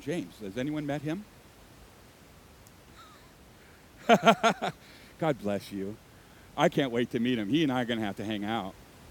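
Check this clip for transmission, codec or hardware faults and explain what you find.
Nothing stood out on listening to the speech, with only the room's own background sound present at about 26 dB below it.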